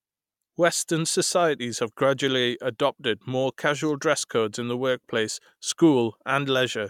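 Nothing goes wrong anywhere in this speech recording, so there's no fault to point to at any moment along the way.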